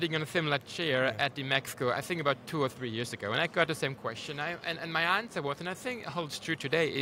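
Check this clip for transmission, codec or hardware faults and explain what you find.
No faults detected here.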